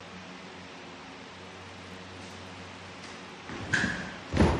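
Filter restarted on every block, from 1.45 to 3.36 s: the filter loses its memory at each block boundary and starts again from silence, leaving a small transient each time. These stack into a buzz at 188 Hz, which fits a 256-sample block, rising and falling with the sound's level.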